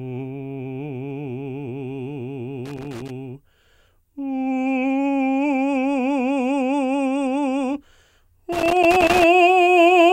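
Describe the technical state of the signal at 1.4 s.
At 1.4 s the music plays through intact, with no audible technical fault at that moment.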